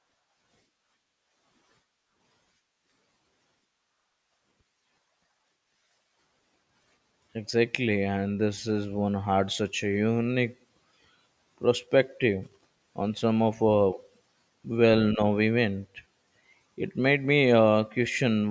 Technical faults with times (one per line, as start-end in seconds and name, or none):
none